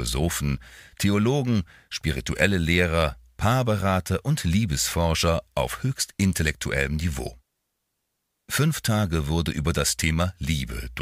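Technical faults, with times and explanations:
No technical faults, with times or otherwise, can be heard in this clip.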